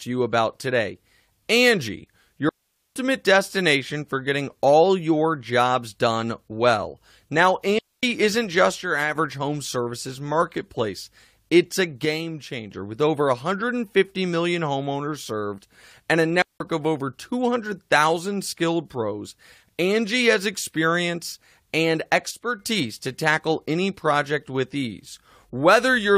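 At 2.49 s the sound cuts to near silence until 2.96 s, a gap of about 0.47 s. This is a digital wireless dropout. The radio link lost too much data to reconstruct, so the receiver muted its output with a very fast fade. The result is a clean hole with no crackle or noise burst at either edge. The same thing happens from 7.79 to 8.03 s (0.25 s) and from 16.42 to 16.60 s (0.18 s).

From 8.81 to 9.16 s the level drops abruptly by about 6 dB and then snaps back. The sound stays present throughout, just quieter. The likely cause is one channel dropping out. With one side of the stereo pair gone, the mono sum carries only half of the shared signal, which gives the 6 dB step. The identical step recurs from 12.05 to 12.72 s and from 22.31 to 22.60 s.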